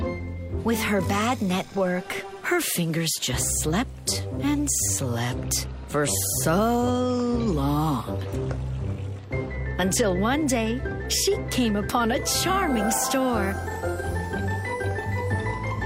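Nothing stood out as a fault anywhere in the audio on listening.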